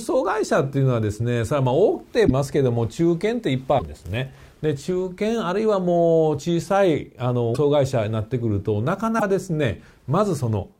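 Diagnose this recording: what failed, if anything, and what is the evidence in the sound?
Codec stage. At 2.26–2.31 s, 3.78–3.82 s, 7.54–7.57 s and 9.18–9.23 s the sound jumps ahead into a brief glitch, one to two 26.1 ms frames long. The likely cause is a broken MP3 bit reservoir: after lost frames, the decoder pulls borrowed data from the wrong frame.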